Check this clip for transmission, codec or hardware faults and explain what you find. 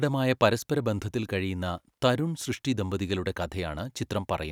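A hardware fault shows up once, from 1.78 to 1.91 s, between "പരസ്പരബന്ധത്തിൽ കഴിയുന്ന" and "തരുൺ സൃഷ്ടി ദമ്പതികളുടെ": loose connector crackle. A worn or dirty contact somewhere in the cable path shifted and began rapidly making and breaking the circuit, so the signal was chopped on and off in an irregular pattern. For roughly 0.13 s the speech is torn by a ragged burst of scratchy crackle before the connection settles again.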